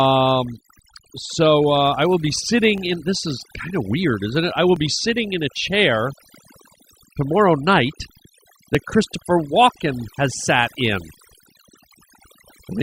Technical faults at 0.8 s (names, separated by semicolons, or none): overdone noise removal; overlap between stream segments